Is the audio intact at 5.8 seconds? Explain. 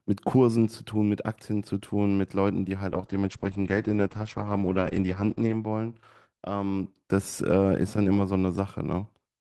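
No, 5.8 s sits inside a call bitrate drop (2.92 to 5.99 s). The encoder got starved, so speech sounds rough and muffled, capped near 8 kHz, which fits roughly 9 kbps.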